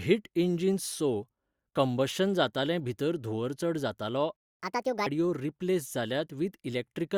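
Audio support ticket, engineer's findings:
Playback stall, 4.36 to 4.60 s: speech cuts out mid-flow, roughly 0.23 s of dead air, then resumes. Likely the player buffer ran dry or its audio thread got blocked, so output just went silent until data arrived.

Catch-up at higher speed, 4.60 to 5.06 s: right after the gap, speech runs fast and chipmunky, 1.5x speed, pitch up about seven semitones. Player resampling its backlog to claw back lost time, then dropping to normal rate.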